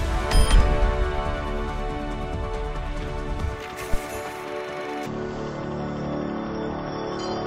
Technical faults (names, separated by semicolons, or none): stereo read as mono